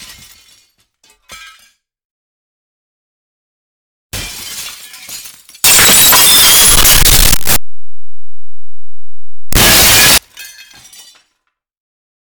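Signed and unsigned mixed up, from 5.64 s to 10.18 s: for these four and a half seconds the 16-bit samples are read with the wrong sign convention, likely a format mismatch. That flips the top bit, so every zero crossing becomes a leap from one extreme of the range to the other. The result is a blast of loud, harsh distortion where quiet moments come out as loud as everything else, ending abruptly at 10.18 s.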